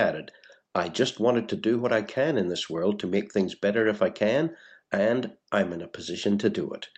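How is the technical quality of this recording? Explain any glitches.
Nothing stood out as a glitch on listening, with the sound carried over a call connection and its bandwidth reaching up to about 8 kHz.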